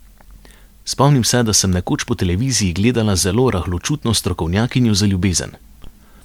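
No technical fault can be heard anywhere in this short recording of speech; the signal stays intact and steady throughout.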